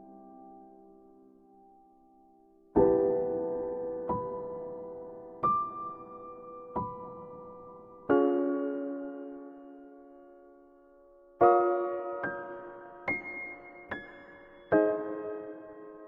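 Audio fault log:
8.10–16.08 s, section at the wrong speed: the playback rate jumps from one moment to the next and stays wrong to the end, running about 1.61 times too fast. The likely cause is a stretch of audio being fitted to the wrong clock by an editor or player, so samples are consumed faster than they were captured. Because speed and pitch are tied together, everything from here on sounds hurried and raised by roughly seven semitones, close to a fifth.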